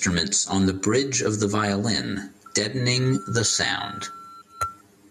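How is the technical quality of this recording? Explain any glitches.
The recording has three technical faults: comb filtering and gain pumping throughout, and a feedback squeal from about 2.5 s to 4.8 s.

Channel delay (comb filtering) colours the whole clip. One channel arrives roughly 10 ms after the other, and when the two are summed to mono, components common to both cancel at evenly spaced frequencies. The first notch sits around 50 Hz, with further notches repeating up the spectrum, so the speech sounds hollow and phasey rather than full.

Gain pumping runs through the entire clip. The level rises and falls by something like 15 dB, leaving the sound squashed with little difference between loud and quiet passages. The likely cause is input gain set far too high, with a fast limiter or compressor clamping down on every peak.

A loudspeaker feedback squeal begins at 2.46 s, right after "bridge of the violin", and lasts until 4.80 s. 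A microphone is picking up the loudspeaker it feeds, and at 1.4 kHz the loop gain exceeds one, so that frequency reinforces itself on each pass. It builds over about two seconds into a steady whistle, reaching about 10 dB above the speech before it stops.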